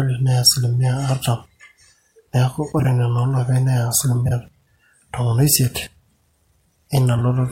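Frames out of order at 2.79–2.85 s, 4.25–4.31 s and 7.16–7.21 s: pairs of roughly 26 ms blocks swap places, giving brief garbled flutters. Unlike dropouts, no time is lost.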